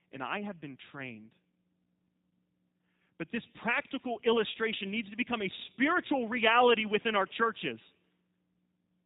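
From start to finish the speech carries G.729 codec damage, plainly audible, and its character fits the G.729A variant at around 8 kbit/s. The encoder keeps only a vocal tract filter, a pitch predictor and a few pulses per short frame, then resynthesises the voice, so it sounds rough and faintly buzzy, with nothing above 4 kHz. A simple low-pass filter would dull the top end but leave the voice natural; here the speech itself sounds rebuilt.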